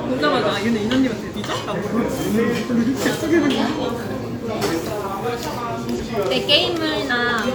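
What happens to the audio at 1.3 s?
The sound jumps forward abruptly between 1.30 and 1.36 s. This is compressed frames skipped: around four frames of about 46.4 ms each go unplayed, dropping roughly a fifth of a second of audio.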